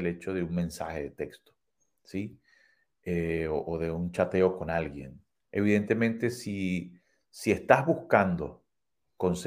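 No technical faults can be heard in this speech, so there is nothing to set out in time order.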